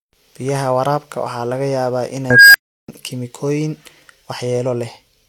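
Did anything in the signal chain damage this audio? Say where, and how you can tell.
Yes. Right after "waraabka waxaa laga yaabaa", at 2.30 s, an unstable filter in the processing stage takes over. A tone around 1.5 kHz swells to clipping within 0.24 s, then 0.34 s of silence follows until 2.88 s, as the recursive feedback overflows and resets.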